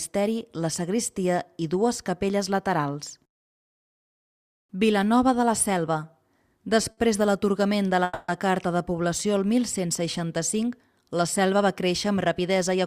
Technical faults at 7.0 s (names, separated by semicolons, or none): short stall from a late packet